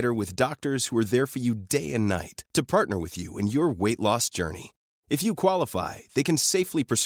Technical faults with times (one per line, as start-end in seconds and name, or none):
none